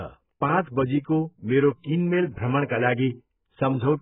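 From start to finish, the speech has nothing above 3.8 kHz. It sounds dull, smeared and warbly. Sibilants turn fizzy. This is likely AAC compression at a very low bitrate, around 8 kbps. The coder dropped the upper band and starved what remained.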